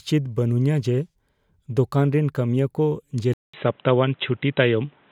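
At 3.34 s the speech cuts out for 200 ms, then returns dull and boxy, with nothing above 3.9 kHz. The level shifts by about 5 dB, and there's new background noise well below the speech. This is likely an input switched to a poorer device.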